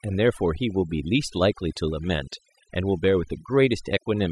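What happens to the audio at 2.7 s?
At 2.7 s the speech sits over a near-silent, twinkling background; overdone noise removal, running throughout, cuts noise-level bands and quiet speech detail away.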